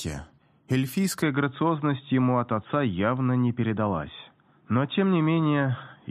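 At 1.22 s the input likely switched to a poorer device, one that passes nothing above 3.8 kHz. From there to the end the sound turns dull and boxy with no gap at the switch, the level holds steady, and a faint new noise floor appears well beneath it.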